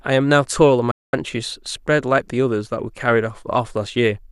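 At 0.91 s the receiver lost good frames and muted, a digital broadcast dropout: speech snaps to silence within 3 ms, returning at 1.14 s.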